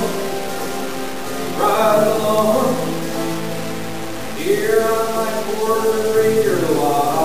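From start to finish, the sound carries low bit depth without dither. Only 4 bits are in use, with samples truncated rather than dithered, likely at conversion. The error tracks the signal, about 15 dB below it. Quiet passages turn gritty, and the faintest sputter or vanish.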